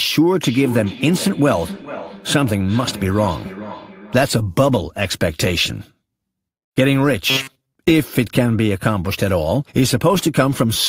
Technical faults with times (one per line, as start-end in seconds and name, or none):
0.42-4.38 feedback echo between two devices
7.30-7.73 robotic sound from repeated short buffers